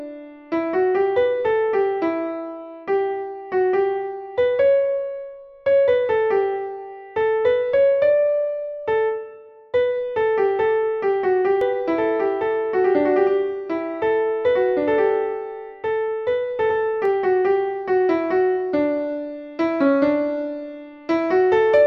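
A doubled audio track runs from 11.61 s to 17.05 s. A second, full-band copy of the sound trails the original by about two seconds and sits roughly 5 dB lower. It is clean and dry, with no decay or room colouring, and it cuts in and out abruptly at those times. This is likely a second capture through a slower path, or an edit that left two copies of the same material out of step.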